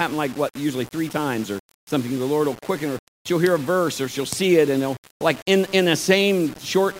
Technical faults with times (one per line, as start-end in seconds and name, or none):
0.00-6.99 low bit depth without dither